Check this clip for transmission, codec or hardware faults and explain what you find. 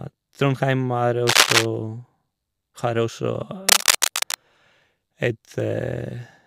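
There's one hardware-type fault here, turning up twice. Cable scratch noise sits over the speech from 1.27 to 1.69 s and again from 3.69 to 4.35 s: dense, ragged bursts of scratchy rustle, a few dB louder than the speech itself. It's most likely a worn cable or connector being moved, so the contact resistance jumps around rapidly and dumps uneven noise into the signal while it shifts.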